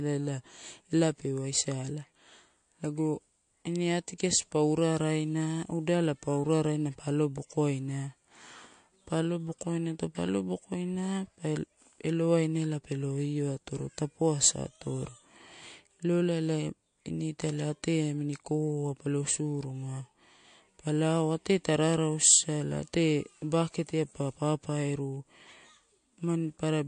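The speech sounds dull and watery for its whole length, with the treble cut off cleanly at about 9.5 kHz and a swirly, chirping texture on the s sounds and smeared attacks. This is likely MP3 compression at a low bitrate, consistent with roughly 48 kbps, where the encoder discards high frequencies and weak detail.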